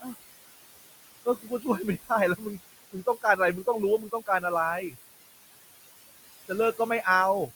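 A speech recording with room noise about 13 dB below the talker, and noise suppressor artifacts throughout: the background is pulled down by about 18 dB between phrases and swells back under them, rather than staying the steady noise an ungated recording would keep. Separately, speech is cut by the noise suppressor at 1.25 to 1.66 s, 2.78 to 3.39 s and 3.98 to 4.44 s, where quiet parts of the speech were mistaken for noise and dropped by about 16, 20 and 17 dB. Roughly 150 to 200 ms within each span sounds swallowed. Unlike a dropout, the sound fades rather than vanishing abruptly.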